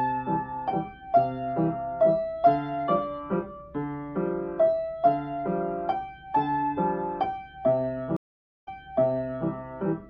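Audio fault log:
8.17–9.49 s stream reconnect: the audio cuts to silence for 0.49 s, then resumes 0.84 s earlier than where it stopped, so a short stretch plays twice. The connection dropped, the player reconnected, and the server resent a burst into a fresh decoder.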